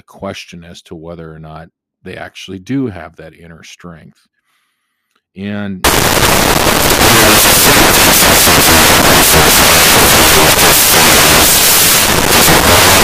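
From 5.84 s to the end, the speech gives way to broadband noise close to white. This is samples built from the wrong bytes: the reader combines each sample's bytes incorrectly, whether offset by one byte, in swapped order or with the wrong alignment, so the rapidly changing low bits dominate every value.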